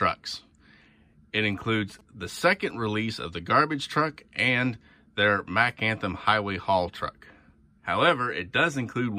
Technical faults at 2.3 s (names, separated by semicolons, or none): GSM signalling bursts